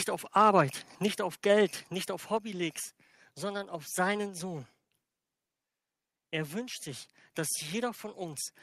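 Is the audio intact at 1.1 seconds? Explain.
No. At 1.08 s there is a microphone volume stepped down fault: speech and background together drop by about 4 dB in one instant step, likely the call software lowering the input volume. Unlike a gradual fade, the level falls at once and stays lower.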